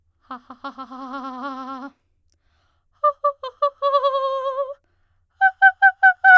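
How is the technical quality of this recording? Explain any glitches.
The music comes through as a continuous, stable signal with no dropouts, clicks, distortion or other technical faults to report.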